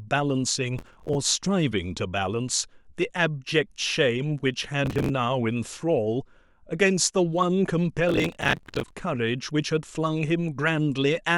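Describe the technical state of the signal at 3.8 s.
At 3.8 s the speech signal is intact, with no dropout, distortion or other fault at that point.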